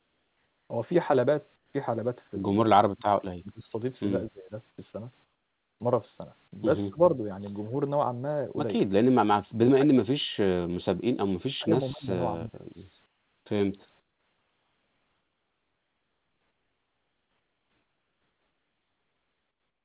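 The background turns flat and featureless, and about 6 to 12 dB quieter, from 0.0 to 0.7 s, 1.56 to 1.74 s, 4.7 to 4.78 s, 5.24 to 5.8 s, 13.06 to 13.46 s and from 14.0 s to the end. This is likely comfort noise in place of the background: the sender stopped transmitting in pauses, and the receiver filled them with steady synthetic hiss. The speech dips sharply or breaks into fragments at 2.71 to 3.08 s, 3.4 to 3.72 s, 4.28 to 4.52 s, 6.89 to 7.2 s, 9.26 to 10.43 s, 11.36 to 11.74 s, 11.91 to 12.2 s and 12.36 to 12.76 s, falling by up to roughly 35 dB. That points to speech suppressed in double talk, where the echo canceller mistook the talker for loudspeaker echo and turned both down. Throughout, the telephone-band codec leaves nothing above 4 kHz.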